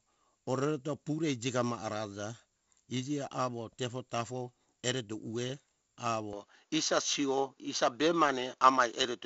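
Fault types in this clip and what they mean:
Input switched to a poorer device: from 6.33 s to the end, the sound likely moves to another microphone. The band drops from 7.7 kHz to 6.9 kHz, the level shifts by about 5 dB, and new background noise sits about 50 dB down, with no gap.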